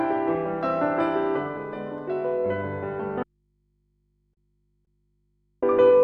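At 3.23 s the sound cuts off abruptly, leaving only a low mains hum roughly 45 dB below the signal until it returns at 5.63 s. This is an audio dropout to a faint residue, with the wanted signal likely lost for about 2.3 s while the path after the break stayed live.

Inside that gap, at 4.33 to 4.40 s and 4.85 to 4.90 s, the residue briefly hangs and holds. Each is a short stall from a late packet: the jitter buffer ran dry, and the receiver stretched the last sound by 35 ms and then 20 ms before resuming, with nothing missing.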